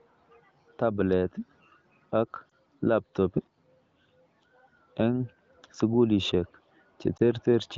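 At 2.49 and 7.17 s, lost AMR speech frames cause brief warbling dips. Each time, the decoder patches one missing 20 ms frame with fading, repeated speech.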